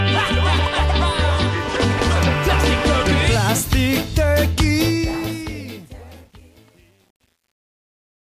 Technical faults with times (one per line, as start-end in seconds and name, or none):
4.78-8.30 truncation distortion on a fade